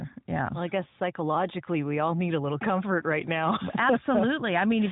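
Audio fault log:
No faults heard in this speech recording.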